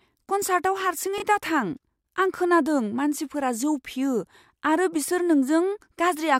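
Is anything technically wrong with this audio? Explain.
Yes, there is one fault. From 1.18 to 1.22 s, chunks out of order: a 20 ms chunk played one chunk late, producing a brief jumbled stutter in the speech with three hard joins.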